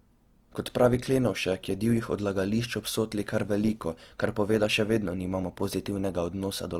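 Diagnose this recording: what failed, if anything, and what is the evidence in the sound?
The codec stage is at fault: the speech carries Opus compression damage from start to finish, and it is plainly audible. The voice sounds grainy and rough, with high frequencies that hiss rather than ring, yet content still reaches about 20.2 kHz. That points to the music (CELT) mode, which keeps every band's energy and fills starved bands with folded or noise-like detail. The likely cause is a rate around 24 kbps. MP3 would leave swirling spectral holes and a narrowed top end instead.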